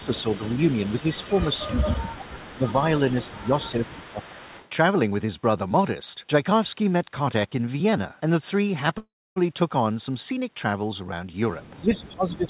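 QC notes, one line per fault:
0–0.42 s, 1.01–2.74 s, 3.24–4.4 s and 11.81 s to the end: speech suppressed in double talk. The talker's level dips in pieces, by about 15 dB in the first run, about 20 dB in the second and last, and about 10 dB in the third. Roughly a second of the second run and under a second of the third is affected. Both sides were likely talking at once, so the echo canceller could not separate local speech from loudspeaker echo and attenuated both.
0–2.14 s, 2.47–2.73 s, 3.08–4.69 s and 11.95 s: echo leak. A faint delayed copy of the speech comes back about 431 ms behind the original, at about 20 dB below the speech in the first two stretches and about 25 dB below in the later ones. The final one is only a brief scrap. The far end was likely on a loudspeaker whose echo canceller did not remove everything its microphone picked up, so the residue was sent back.
8.98–9.38 s: call audio freeze. 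Audio stalls for 381 ms. The last sound is briefly extended, then about 280 ms is silent before speech resumes where it stopped. Nothing is lost, but everything after this point plays 381 ms later. Packets were likely held up in transit, so the jitter buffer ran empty and the receiver filled the wait. The G.711 A-law path band-limits everything to below 4 kHz.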